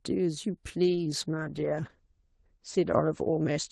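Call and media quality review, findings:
Call bitrate drop, 0.85 s to end of clip. Speech turns rough and muffled. Top end narrows from 12 kHz to 8 kHz, worst for 1.5 s. Bandwidth estimate fell and the Opus encoder was starved, consistent with 32 down to 11 kbps.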